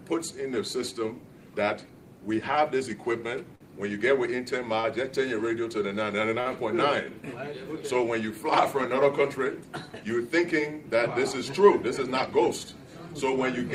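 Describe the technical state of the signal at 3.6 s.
At 3.55 to 3.63 s there is a short stall from a late packet: the jitter buffer ran dry, so the last sound is held for about 50 ms with a slight buzz or dip, then resumes exactly where it stopped. Unlike a lost packet, nothing is skipped.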